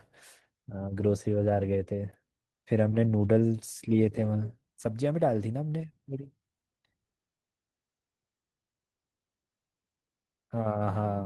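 No technical faults can be heard anywhere in the speech.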